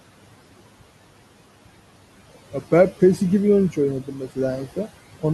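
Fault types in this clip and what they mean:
Noise suppressor artifacts: The suppressor keeps pulling down bands it thinks are steady noise, about 18 dB here, so the room noise, sitting about 17 dB under the speech, drops away in the gaps and swells back under talking.
Speech cut by the noise suppressor: Between 4.03 and 4.37 s the suppressor mistakes bits of the speech itself for noise and ducks them by up to about 12 dB, roughly a tenth of a second in all, so those sounds come across swallowed and faint.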